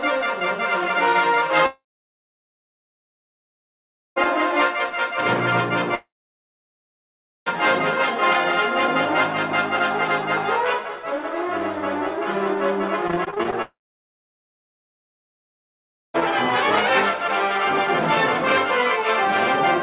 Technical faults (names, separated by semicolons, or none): long network dropout; repeated packet loss (robotic sound)